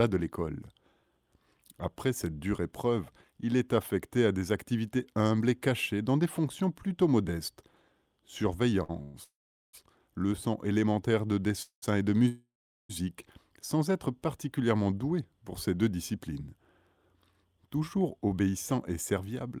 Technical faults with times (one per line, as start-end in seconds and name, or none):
8.83-8.90 short stall from a late packet
9.02-9.75 call audio freeze
11.62-11.84 call audio freeze
12.28-12.91 call audio freeze
16.15-19.51 jitter buffer speed-up